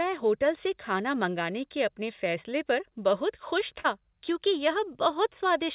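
Speech carried over a call link, band-limited with nothing above 4 kHz, which points to a narrowband G.711 mu-law codec running at 64 kbps. At 3.80 to 3.86 s there is a short concealed packet loss. About 40 ms of audio failed to reach the decoder in time, and the receiver filled the gap by extending the preceding sound for roughly 41 ms before crossfading back into real audio. The result is a brief smear or wobble.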